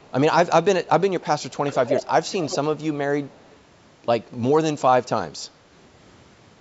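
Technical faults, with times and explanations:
0.01–0.11 s, 2.77–2.81 s and 3.25–3.56 s, echo leak: a very faint trailing copy of the speech, about 138 ms late, sits far below the talker.
1.67–2.57 s, echo leak: the same 138 ms delayed copy becomes strong, nearly as loud as the speech, giving a doubled, smeared sound. The likely cause is a far-end loudspeaker whose echo canceller failed to remove what its microphone picked up and sent back.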